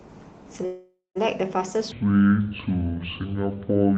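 Speech carried over an Opus call link, audio band topping out near 8 kHz. From 0.65 to 1.17 s there is a call audio freeze: the last sound drags on as a fading buzz, with about 170 ms of silence, then speech resumes where it stopped, most likely because delayed packets drained the jitter buffer. From 1.92 s to the end, a section at the wrong speed plays at 0.53x, roughly ten semitones low and slow, likely from playback against a mismatched clock.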